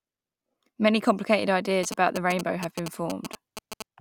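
From 1.83 to 3.82 s, GSM signalling bursts from a nearby phone are rectified into the audio as galloping ticks and 217 Hz buzz, about 10 dB below the speech, showing as clustered vertical stripes on a spectrogram.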